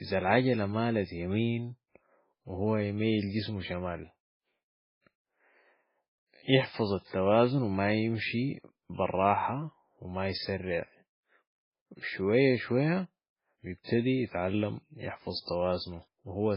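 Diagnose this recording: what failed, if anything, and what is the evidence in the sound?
MP3 compression damage runs throughout the speech, with the likely cause at the codec stage. Nothing is present above 5.3 kHz, a hard treble ceiling typical of an encoder starved of bits, and the damage is heavy, which fits a very low bitrate around 16 kbps. With so few bits, weak frequency lines are zeroed and flicker between frames, giving a watery, swirly texture, metallic chirping on s sounds and smeared consonant attacks.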